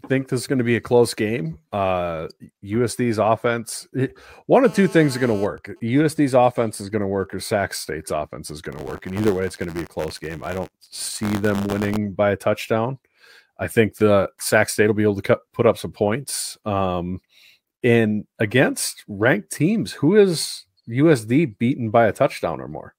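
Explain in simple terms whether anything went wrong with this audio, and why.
Three things went wrong in this speech recording.

At 4.65 to 5.45 s, just after "offense eh one", there is GSM phone buzz: a nearby mobile phone on a call makes a harsh 217 Hz rasp.

From 5.46 to 7.38 s come GSM signalling bursts: the same phone, its user now silent, leaves a faint pattern of even ticks with a longer buzz twice a second.

From 8.72 to 11.98 s, between "offense is going" and "by a touchdown I", buffer tearing adds a robotic 94 Hz rattle. A small slice of each buffer replays audio about 20 ms old, which fits a 512-sample buffer.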